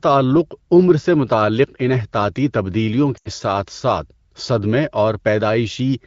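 At 3.18 to 3.29 s the speech briefly smears and sags, dropping quickly toward silence before returning weak and rough for a moment. These are lost AMR speech frames: about 80 ms of coded audio, which fits a run of four 20 ms frames, failed its radio checksum. The AMR wideband decoder filled the gap by repeating the last good pitch and vocal tract settings at falling gain, fading quickly as wideband concealment does.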